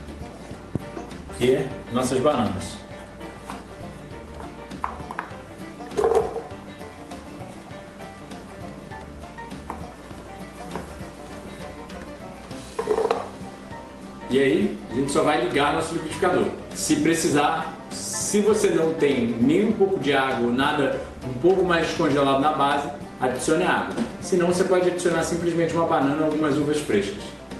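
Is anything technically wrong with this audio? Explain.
No, nothing is technically wrong here: the audio comes through a normally working WebRTC call path, where the codec, likely Opus, leaves only its ordinary coding noise and a top end that stops around 12 kHz.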